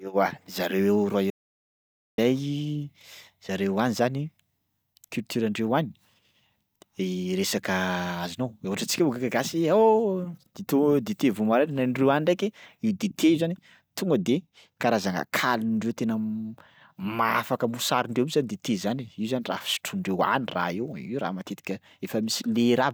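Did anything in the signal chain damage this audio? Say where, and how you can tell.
Yes. Audio dropout to silence, 1.30 to 2.18 s. Speech stops dead into silence, no room tone. Likely a lost input link upstream.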